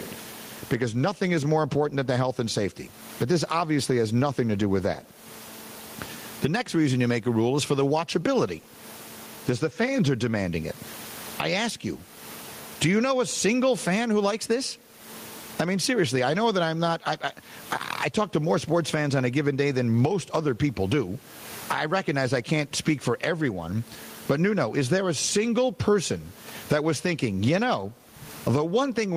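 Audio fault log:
Throughout, gain pumping: Gain swings roughly 25 dB. Levels sound squashed. Likely gain set too high, hitting a fast limiter.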